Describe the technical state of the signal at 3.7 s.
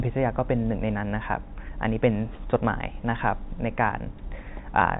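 At 3.7 s the signal is caught in loudspeaker feedback squeal, running from 2.46 to 3.99 s: a microphone re-amplifies its own loudspeaker until a 4.9 kHz tone dominates, sitting about 5 dB above the speech. Unlike a steady interference whine, it swells from nothing over roughly a third of a second.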